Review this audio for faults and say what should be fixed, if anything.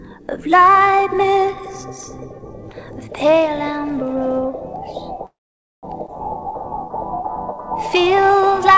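A call audio freeze runs from 5.26 to 5.85 s. The sound briefly trails off, then there is about 0.5 s of silence, and it resumes where it stopped, with nothing lost. On a spectrogram this shows as a blank vertical band, and the waveform goes flat. The likely cause is delayed packets draining the jitter buffer. To prevent it, give the network path steadier delivery or allow a slightly larger jitter buffer target.

A skip ahead occurs at 6.07 to 6.10 s. Roughly 0.4 s of audio is discarded and the two sides are butted together almost directly. This appears as an abrupt discontinuity in the waveform and a hard vertical seam in the spectrogram. To prevent it, stop the buffer from overflowing after the stall by draining the backlog through gradual time compression instead of dropping audio.

A jitter buffer slow-down spans 6.40 to 8.73 s. Repeated pitch periods stretch the audio to 95% speed at unchanged pitch, adding 128 ms. 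The spectrogram shows slightly elongated harmonics and the waveform shows repeated near-identical cycles. To prevent it, tune the buffer's adaptation so it rebuilds its reserve more gently after the jump.

Throughout, the G.722 call path leaves nothing above 8 kHz, which shows as an empty band at the top of the spectrogram.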